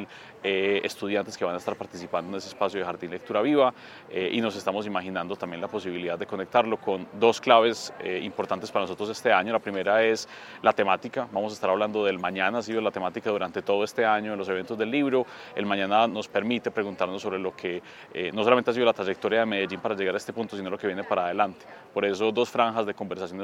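No technical faults can be heard in this audio, so there is nothing to describe in time order.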